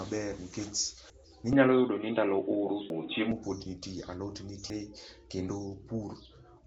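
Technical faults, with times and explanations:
Throughout: Nellymoser compression. The speech was likely coded with Nellymoser Asao, the old Flash microphone codec, at 32 kbps. It codes the sound in short blocks with a fixed, small bit budget, so weak bands get no bits and are filled in with noise instead. Nothing survives above 7.7 kHz, and the codec damage is plainly audible as a rough, hissy halo around the speech with a smeared, underwater quality.
1.10, 2.90 and 4.70 s: audio missing between chunks. The recorder likely works in 2-second chunks and drops a piece of sound each time it closes one chunk and opens the next, about a fifth of a second at each of the three joins. The two sides are butted together with no silence, so the speech skips forward at a steady 1.8-second spacing.
1.53 to 3.32 s: input switched to a poorer device. The recording likely changed its input mid-stream to a lower-grade microphone or a headset's call mode, with no silence at the switch. 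For this stretch nothing passes above 3.8 kHz, so the speech turns dull and boxy. The level shifts by around 5 dB and a new noise floor comes in roughly 45 dB below the speech. The duller sound starts just before "pod nitie".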